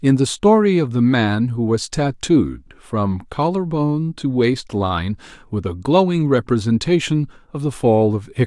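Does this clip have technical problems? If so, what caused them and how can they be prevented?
No, nothing in this speech recording points to a technical fault, so there is no cause to trace and nothing to prevent.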